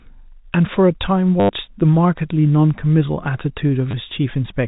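Packet loss with last packet repeated hits this telephone-band speech twice, at 1.40 to 1.49 s (about 90 ms) and 3.91 to 3.93 s. The receiver replayed the last packet, causing a brief robotic buzz near 100 Hz, which fits 10 ms packets.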